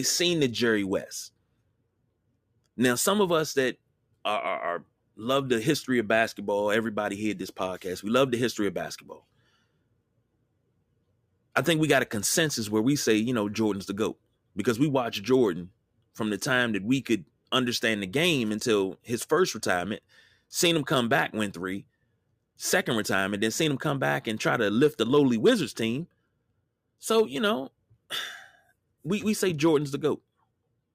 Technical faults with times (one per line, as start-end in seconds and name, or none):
none